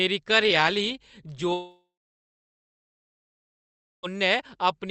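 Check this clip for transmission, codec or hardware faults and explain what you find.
One transmission fault is present: a long network dropout.

From 1.53 to 4.05 s the speech breaks off. The receiver likely lost packets and extended the last sound as a decaying buzz, then left about 2.2 s of near-silence before the audio resumed with the missing part gone. The call codec's band limit near 8 kHz can be heard throughout.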